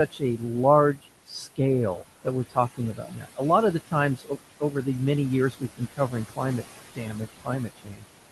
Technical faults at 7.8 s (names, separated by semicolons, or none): noise suppressor artifacts; speech cut by the noise suppressor